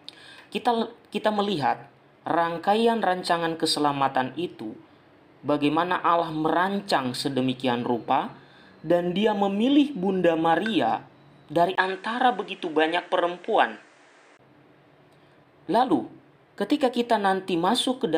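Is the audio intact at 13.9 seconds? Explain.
No. From 11.75 to 14.39 s the sound turns duller, with nothing above 10.2 kHz, likely because the input switched to a poorer device. A 20 ms silence at the switch and a new faint noise floor, far below the signal at an unchanged level, set it apart from a simple filter.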